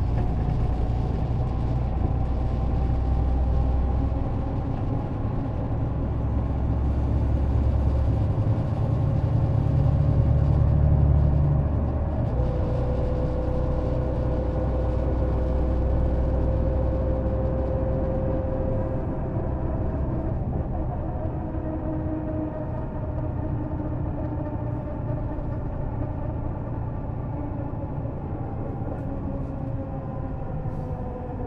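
At 4.27 s and again at 14.17 s the sound skips forward abruptly, each time dropping roughly a tenth of a second with the edges butted together and no gap. The regular spacing, matching a 10 s chunk length, points to audio missing between chunks, likely lost as one recording block closed and the next opened.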